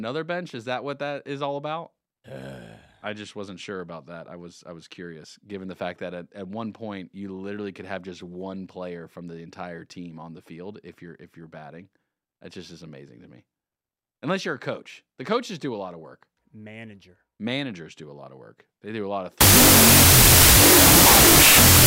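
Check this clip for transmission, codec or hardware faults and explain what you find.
One fault is present. From 19.41 s to the end, a wrong sample width turns the speech into loud noise, buried, at half speed and an octave low. This fits 32-bit float data read as 16-bit integers.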